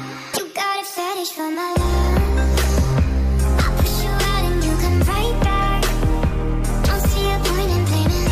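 Damaged data in the compressed stream at 0.30 to 0.39 s makes the decoder misread its frames and lose sync, producing a brief glitch lasting about 84 ms.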